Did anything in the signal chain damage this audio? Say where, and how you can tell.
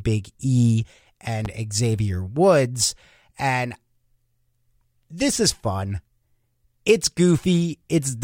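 Yes. A single loud pop sits at 1.45 to 1.48 s, a sharp transient peaking a few dB above the speech, which continues underneath unbroken. This points to a voltage step, likely in the analogue wiring from a plug, switch or static discharge, added to the signal.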